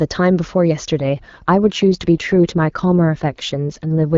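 From about 1.0 s to 4.16 s an AMR rate drop takes hold. The AMR-WB speech falls from its clean 23.85 kbit/s to 8.85 kbit/s, and the voice turns rough and raspy with no gap or band change. A spectrogram keeps its 7 kHz ceiling, but the harmonics blur into smeared, noisy texture.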